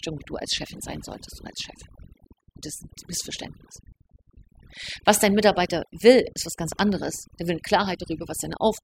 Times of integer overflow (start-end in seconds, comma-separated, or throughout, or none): none